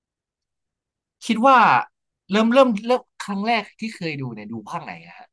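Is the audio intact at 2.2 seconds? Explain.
Yes, the speech at 2.2 seconds plays through cleanly, with no dropout, click, distortion or other fault at that moment.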